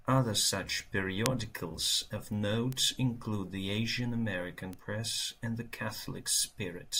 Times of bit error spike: 1.26, 2.72, 4.73

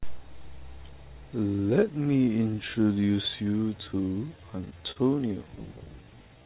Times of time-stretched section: 1.46-6.46

